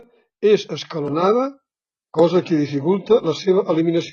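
An adaptive stream at a lower bitrate takes over from 1.02 s to the end. With no gap, the speech turns thinner and loses everything above 11.1 kHz. That points to the player switching from high-bitrate AAC to a low-bitrate HE-AAC version.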